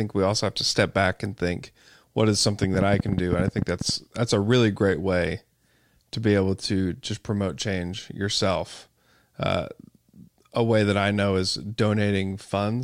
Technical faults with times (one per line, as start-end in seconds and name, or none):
2.63-3.90 train of clicks